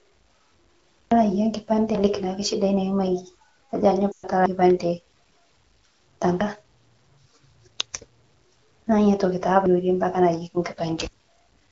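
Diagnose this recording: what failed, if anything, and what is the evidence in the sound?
Driver or buffer stage: there are abrupt skips ahead at 1.12, 1.95 (right before "naake shidai"), 4.46 and 11.05 s. That's likely a dropped buffer (overrun), with roughly 0.1 to 0.3 s gone each time.

Network stage: from 4.11 to 4.26 s there are lost AMR speech frames, about 120 ms. The decoder drops the last sound to near silence within two frames, then comes back rough.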